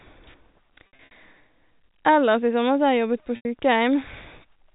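From 0.87 to 1.11 s, packet loss with pitch repetition fills about 150 ms of gaps scattered over 240 ms, the longest 60 ms. It returns after "har jeg jobbet på" at 3.36 s for 90 ms. Repeated pitch periods give a held, buzzy tone that fades into silence in the longer gaps.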